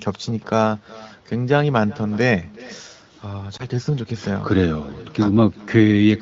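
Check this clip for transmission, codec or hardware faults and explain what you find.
Two faults are present in this speech clip.

Echo with no canceller, throughout: the far end's loudspeaker feeds its microphone unchecked, returning a faint copy about 22 dB down, roughly 0.4 s late.

Lost AMR speech frames, 3.57 to 3.62 s: the decoder concealed a dropout, about 20 ms long, by repeating earlier speech parameters at reduced gain, causing a brief dip or warble. The surrounding AMR-WB audio at 15.85 kbit/s stays clear.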